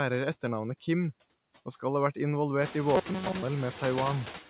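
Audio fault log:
throughout: noise suppressor artifacts. Bands judged to be steady noise are pulled down by about 10 dB frame by frame, so the background dips between phrases and swells beneath them, with the room noise rising around 2.5 s.
2.95–3.42 s: robotic sound from repeated short buffers. For most of this stretch, a tiny slice of sound seems to be looped instead of fresh audio, imposing a rigid metallic buzz near 188 Hz. That matches a repeat roughly 5.3 ms long, likely from late-arriving buffers.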